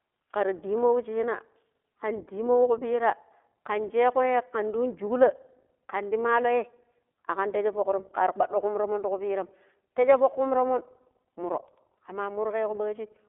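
iLBC codec damage runs through the whole clip, from start to finish. The codec codes each short frame's excitation on its own rather than predicting from the frame before, so the speech comes out clear but slightly rough and synthetic, with a plainly audible coded texture that fits the 15.2 kbps mode with 20 ms frames. The line band sits at roughly 300 Hz to 3.6 kHz, and nothing survives above 3.8 kHz, leaving the sound narrow and muffled.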